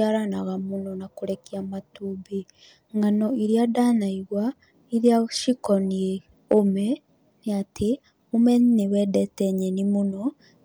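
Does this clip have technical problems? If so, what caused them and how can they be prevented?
Yes. Hard clipping hits brief speech peaks at 5.07 s and from 6.52 to 6.59 s, overdriven by about 1 dB and 2 dB, so tops are sliced flat. The waveform shows squared-off peaks; the spectrogram shows vertical smears of high harmonics. Leaving more headroom before conversion prevents it.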